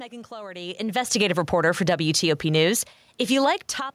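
From 1.0 to 3.41 s, automatic gain falling: the gain control lowers its gain by about 3 dB, so speech and room noise sink together.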